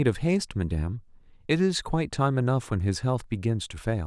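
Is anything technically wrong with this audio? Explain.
No, nothing technically wrong can be heard here.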